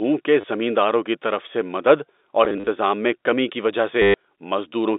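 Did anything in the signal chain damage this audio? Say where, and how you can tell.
Yes: the network stage damaged it, as packet loss with last packet repeated at 0.41 to 0.44 s before "زمینداروں کی طرف سے", scattered across 2.45 to 2.67 s between "طرف سے مدد اور" and "میں کمی کی وجہ", and at 4.02 to 4.14 s after "میں کمی کی وجہ". The receiver looped the last packet until fresh data arrived, and the longer runs buzz robotically at a rate that fits 10 ms packets. The G.711 telephone band otherwise sits intact under the dropouts.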